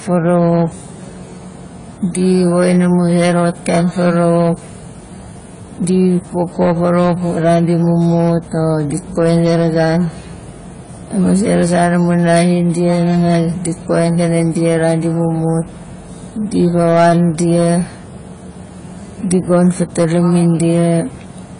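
From start to finish, a stage in the chain is overdriven by about 7 dB, so a small share of peaks are sheared flat: hard clipping, heard as gritty crackle on the loudest speech. Throughout, the audio is also squeezed hard by a lossy coder, likely AAC compression at a bitrate near 24 kbps, leaving nothing above 10 kHz, a dull, smeared sound and watery sibilants.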